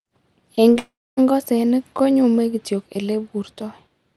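At 0.55–0.59 s and 0.73–0.77 s, short concealed packet loss: about 20 ms of audio went missing each time and was patched by extending the preceding sound, heard as brief smears. From 0.79 to 1.19 s comes a long network dropout, likely from audio not arriving: a fading buzz, then about 0.25 s of silence, before the speech returns on "ng'osenik konyume kityok" with roughly 0.38 s lost.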